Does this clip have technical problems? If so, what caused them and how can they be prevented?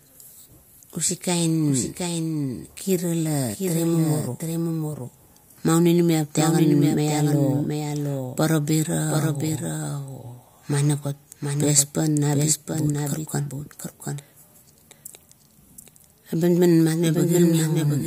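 Yes. A doubled audio track runs through the whole speech clip: a second, full-band copy of the same audio trails the original by roughly 0.7 s, about 5 dB quieter, with no decay or room colouring, so it sounds like a flat, detached echo rather than reverberation. The likely cause is the signal being captured twice, once through a slower path. On a spectrogram, every syllable reappears as a fainter, identical shape shifted right by a constant gap. To prevent it, route each source through only one monitored input and mute any loopback or duplicate capture path.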